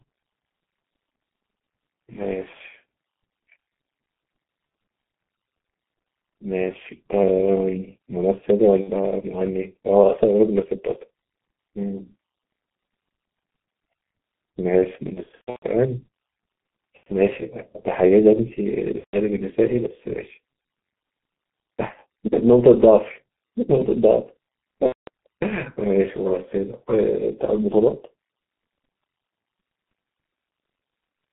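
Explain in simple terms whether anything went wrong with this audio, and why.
Yes, two things went wrong. First, the whole recording passed through the G.723.1 codec, an old internet-phone system that squeezes speech into very little data and handles sound only between about 150 Hz and 3.5 kHz. It also updates its model of the voice slowly and here compresses heavily, so the speech is muffled and hoarse throughout, with smeared consonants.

Second, there is VoIP packet loss concealed by the speech codec. Pieces of the audio went missing in transit, and the decoder filled each gap by stretching out the last sound it had while letting it fade. You hear brief buzzy or blurred patches at 4.67–4.73 s and 8.81–8.91 s, a slightly longer one at 16.97–17.07 s, and longer ones at 18.98–19.17 s and 24.86–25.09 s. The worst is 15.14–15.68 s, where repeated dropouts leave the speech broken for about half a second.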